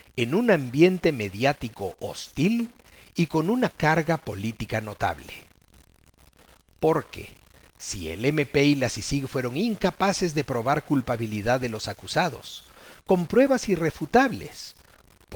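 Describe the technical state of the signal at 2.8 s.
At 2.8 s the speech carries a stuck bit fault, present across the whole clip rather than at this moment alone. The audio has distortion riding on the speech, and the quieter gaps are filled with a gritty noise floor. One bit of each sample is held at a fixed value, likely from a broken data line or converter, so about half the samples are off by that bit's weight.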